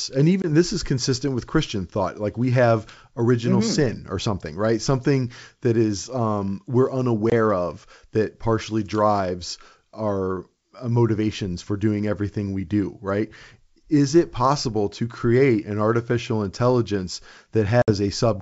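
Packet loss on the ADPCM call hits three times: 0.42–0.47 s before "this is consistent with", 7.30–7.33 s after "that is um we're", and 17.82–17.91 s, the last about three packets long. Each is a hard silent gap, and the decoder's predictor and step size lose sync, so the sound comes back slightly distorted before settling.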